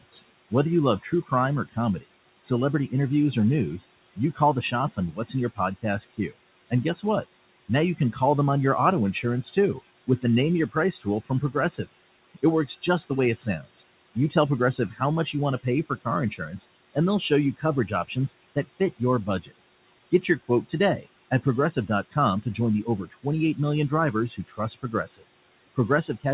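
Noise suppressor artifacts run through the whole recording. The suppressor pulls the room noise down by about 21 dB in the gaps, so the background sinks between phrases and swells back up beneath the speech. A spectrogram shows the noise floor blinking on and off with the speech, with scattered isolated specks in the gaps. The room noise sits about 18 dB below the speech, and the whole band stops at 4 kHz, which points to a narrowband telephone codec such as G.711.

Speech cut by the noise suppressor happens in three stretches: 0.11 to 7.04 s, 9.13 to 19.6 s and 20.22 to 26.25 s. In each, the suppressor mistook quiet parts of the speech for noise and turned them down along with the background, by as much as about 19, 21 and 20 dB respectively. That adds up to roughly a second, two seconds and a second. Soft consonants and word endings come out swallowed. On the waveform they show as abrupt dips in the envelope, and the spectrogram shows thinned or missing high-frequency consonant energy.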